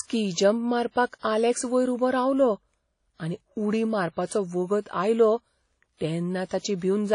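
A low-bitrate transform codec, likely Windows Media Audio (WMA) compression, has been applied to this speech clip, and its coarse quantisation is plainly audible throughout. Nothing survives above 10.1 kHz, and the ringing, washy result fits a bitrate around 32 kbps. Long transform blocks spread the quantisation noise over tens of milliseconds, so the sound rings and smears, with a hiss that swells and fades with the signal. The same block structure causes pre-echo. Where a sharp onset lands late in a block, noise scaled for that loud attack also fills the quiet stretch just before it. This happens from 1.19 to 1.23 s, just before "आलेक्स वयर उबो", then at 5.97 to 6.01 s, 6.47 to 6.51 s and 6.59 to 6.64 s. Each time a brief hiss of about 40 to 60 ms runs ahead of the attack, which sounds blunted and smeared.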